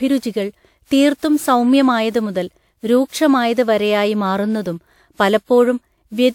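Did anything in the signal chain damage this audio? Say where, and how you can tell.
Yes: generation loss throughout at the codec stage, likely from roughly seven WMA 128 kbit/s re-encodes; the spectrogram shows smeared onsets and nothing above 18.6 kHz.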